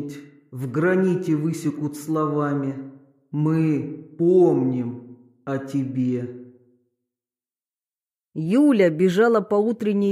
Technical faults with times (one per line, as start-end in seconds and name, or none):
none